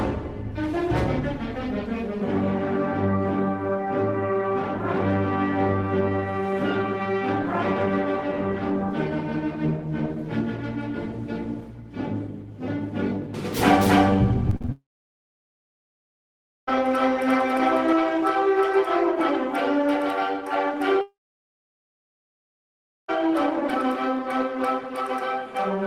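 From 13.54 to 17.93 s a doubled audio track is heard, likely from the audio being captured a second time through a slower path. A full-band copy about as loud as the original trails it by around a third of a second, with no room colour, and starts and stops abruptly.

Between 14.50 and 14.70 s, repeated packet loss strikes four times. Each hole, the longest 38 ms, is patched by continuing the last sound, so about half of that 0.2 s stretch is filler. The result is choppy, with pieces missing.

A long network dropout follows from 14.72 to 16.69 s, and another from 21.01 to 23.10 s, each likely caused by no audio arriving for about 2 s. The receiver stretches the last sound into a brief fading buzz or hiss, then about 1.9 s of silence remains before the audio resumes with the lost part gone.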